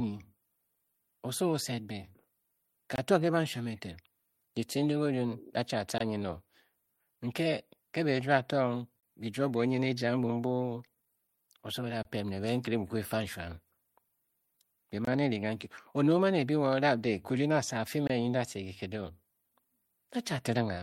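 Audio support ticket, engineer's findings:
Gap between chunks: holes of about 23 ms at 2.96, 5.98, 9.00, 12.03, 15.05 and 18.07 s. The first comes just before "to ke banshuam eten" and the last just after "a fii". The 3.0 s interval points to chunked delivery with silence padded at each join. No audio is lost.

Repeated stalls (stutter): 10.34–11.65 s, ending just before "oso o". The jitter buffer ran dry 14 times, with the longest wait 12 ms. Each stall was bridged by continuing the last sound, about 125 ms in total, roughly a tenth of the span. Nothing is missing, but the audio drags and stutters.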